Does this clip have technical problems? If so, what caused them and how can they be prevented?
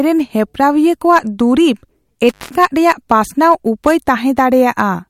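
Yes. Intermittent contact cuts the speech from 2.28 to 2.54 s, just before "ᱨᱮᱭᱟᱜ ᱯᱟᱥᱱᱟᱣ ᱩᱯᱟᱹᱭ": a loose cable or plug opened for about 0.18 s, with crackle as it broke and remade contact. On a waveform this is a near-flat gap bounded by sharp spikes; a spectrogram shows a dark band edged by thin vertical broadband streaks. Secure connectors, replace worn cables, and add strain relief so leads cannot wiggle during recording.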